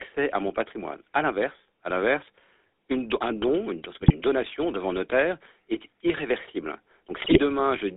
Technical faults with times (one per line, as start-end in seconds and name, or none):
0.00-7.96 GSM full-rate codec
4.02-4.11 GSM bit errors
7.20-7.39 GSM bit errors